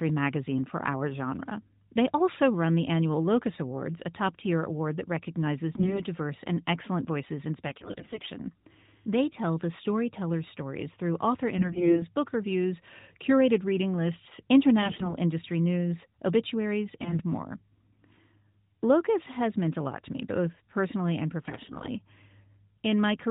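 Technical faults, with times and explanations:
5.76–6.02 s, 7.66–8.31 s, 11.58–12.06 s, 14.82–15.14 s, 17.00–17.22 s and 21.44–21.89 s: AMR bit errors. Corrupted low-priority bits in the narrowband mobile codec's frames, which fits the 12.2 kbps mode, misplace the excitation pulses and skew the fine gain and spectral values. The speech turns hoarse, scratchy and gargly while keeping its pitch and loudness, with no gaps or muting as in frame loss. The first burst falls right after "tier award that recognizes".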